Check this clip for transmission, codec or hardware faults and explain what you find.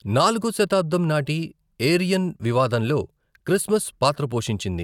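Nothing in the speech points to a fault anywhere along the path from capture to playback. There is nothing here that needs further explanation.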